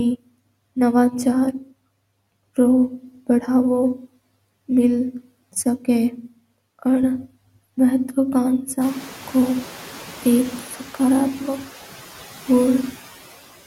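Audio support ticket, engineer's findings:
Noise suppressor artifacts throughout. Background noise cut by about 13 dB, dropping between phrases and swelling back under speech. Suppressor attenuating bands per frame. Room noise rising around 9 s, about 20 dB below speech, comes through with these same artifacts.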